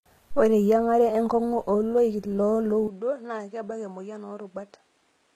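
From the start, the speech carries plainly audible codec damage, likely HE-AAC compression at a low rate, around 20 kbps. The treble above the core band is rebuilt from copied lower bands, so sibilants sound gritty and metallic, with nothing above 14.8 kHz.

At 2.88 s, just after "enkung'u oloik loo", the sound turns duller and drops by roughly 10 dB with no gap at the switch. This is likely the input switched to a poorer device. The band now stops at 9.8 kHz, and a new noise floor sits about 40 dB below the speech until the end.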